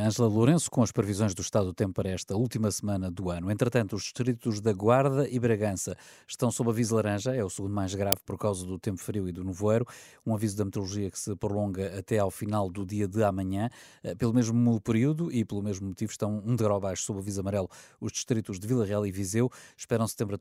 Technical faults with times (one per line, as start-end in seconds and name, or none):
8.12 uninitialised buffer